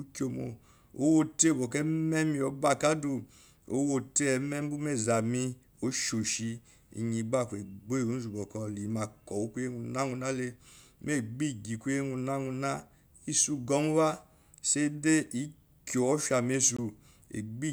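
At 15.27 s and again from 16.77 to 16.79 s, a block of digital silence drops the speech to zero without any fade. The 5 ms gap sounds like a tick, and the 20 ms gap like a brief hole, consistent with missed buffer fills.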